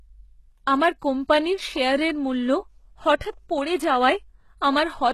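Throughout the speech, sibilants sound gritty and lispy with treble ending near 12.3 kHz, likely HE-AAC compression at about 16 kbps, rebuilding the top from copied lower bands.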